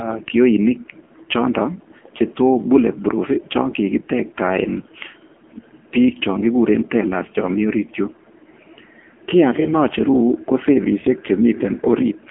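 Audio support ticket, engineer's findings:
Throughout, 0 to 12.3 s: AMR narrowband mobile codec. Speech band-limited to a telephone line, roughly 250 Hz to 3.4 kHz, nothing above 3.7 kHz. Heavy codec damage: buzzy, synthetic timbre, which fits a low AMR-NB mode near 6.7 kbps with too few pulses per subframe to rebuild the excitation. Spectrogram: flat, empty band above 3.7 kHz, thin low end, smeared harmonics. Waveform: coarse, pulse-like periodic structure.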